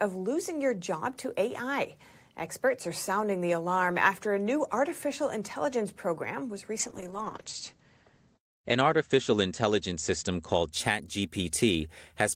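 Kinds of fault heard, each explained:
Call bitrate drop: from 6.83 s to 10.93 s, right after "artificial intelligence program was", the speech turns rough and muffled, with the top cut from 20 kHz to 8 kHz. That fits a reduced bandwidth estimate pushing the encoder from about 32 to 10 kbps, worst for 1.26 s.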